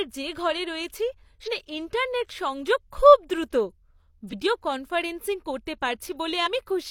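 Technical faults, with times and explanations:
1.43–1.48 s, 4.29–4.34 s, 6.42–6.48 s: damaged data in a compressed stream, heard as brief glitches, as the decoder misreads corrupted frames and loses sync until the next frame header.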